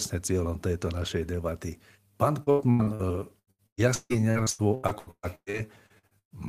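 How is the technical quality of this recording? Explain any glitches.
The recording has two stretches of repeated packet loss (robotic sound): 2.43 to 3.02 s and 3.39 to 6.33 s. The speech turns choppy because lost packets are patched by stretching the last sound. Nearly half of each stretch is filled in, with gaps up to 82 ms and 155 ms.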